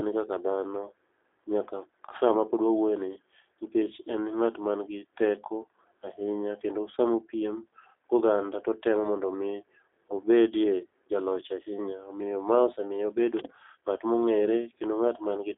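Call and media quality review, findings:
G.729 codec damage throughout. Rough, synthetic speech, band-limited to 300 Hz to 3.6 kHz. Pulse-coded excitation at a rate that fits 8 kbit/s G.729A.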